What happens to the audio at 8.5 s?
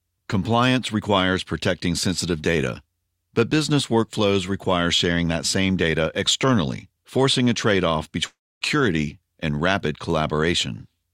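At 8.5 s you're in the middle of a gap running from about 8.27 to 8.63 s. The sound doesn't stop cleanly. The last bit gets smeared on as a buzzy tail that fades, then there's roughly 0.27 s of silence. When it picks up at 8.63 s, about 0.34 s of material is simply gone. That pattern points to a likely long network dropout, with the receiver papering over the hole until it gave up.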